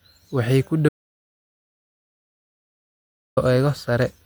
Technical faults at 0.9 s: audio dropout to silence

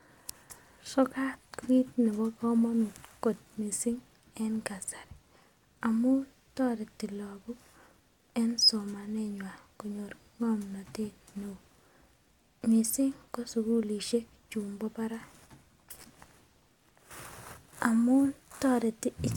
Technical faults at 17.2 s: none

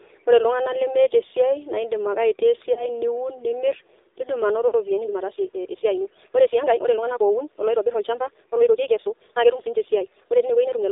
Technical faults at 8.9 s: AMR narrowband mobile codec; time-stretched section

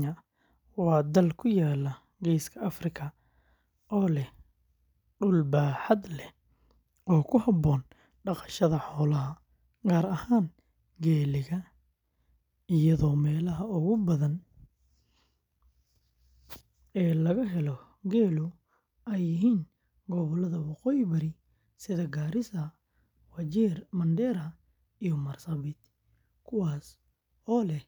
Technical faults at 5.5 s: none

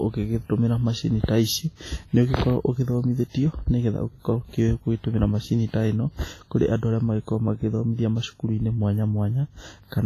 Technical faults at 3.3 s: WMA compression; pre-echo

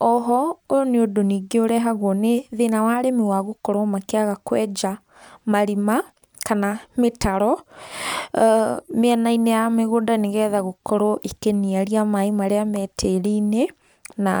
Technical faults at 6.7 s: none

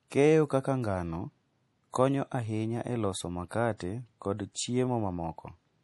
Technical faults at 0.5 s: MP3 compression

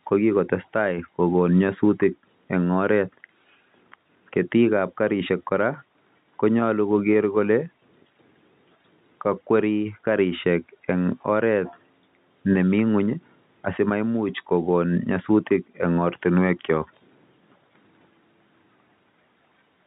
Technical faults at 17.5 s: none

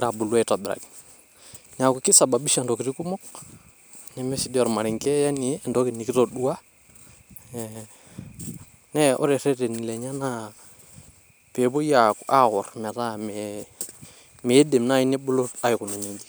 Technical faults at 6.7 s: none

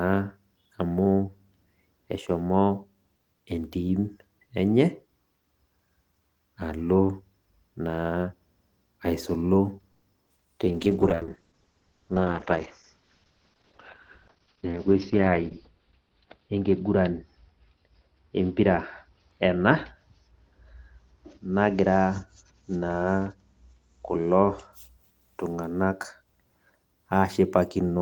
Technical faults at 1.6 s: none

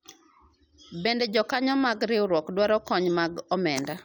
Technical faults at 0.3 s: none

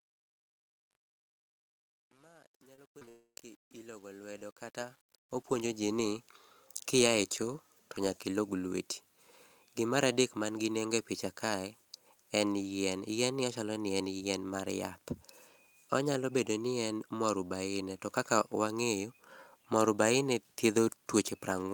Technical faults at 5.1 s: truncation distortion on a fade

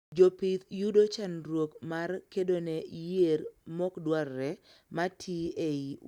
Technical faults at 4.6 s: none

